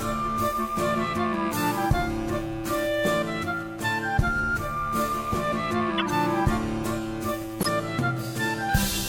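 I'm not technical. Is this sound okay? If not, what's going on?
No. There are two short glitches, at 5.98 to 6.11 s and 7.61 to 7.68 s, in this music. Each is a corrupt frame decoded. A few small chunks of the compressed audio got damaged, and the player played them anyway. You hear brief chirps or noise bursts.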